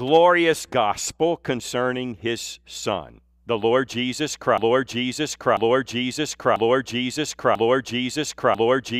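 From 4.58 s to the end, the audio falls into a broken-record loop. A fragment of about 0.99 s plays, then plays again, exactly the same, back to back. It repeats four times and never recovers. The likely cause is a stalled player, encoder or stream that kept resending the last piece it held. Whatever should have played after 4.58 s is lost.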